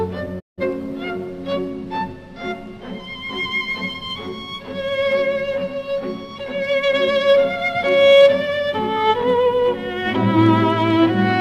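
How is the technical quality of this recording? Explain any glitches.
One glitch stands out: a digital broadcast dropout from 0.39 to 0.63 s. The receiver lost valid frames and muted, fading out over 20 ms. About 0.17 s of programme is gone, which fits roughly four lost frames. It is clean silence rather than clicks or repeated fragments.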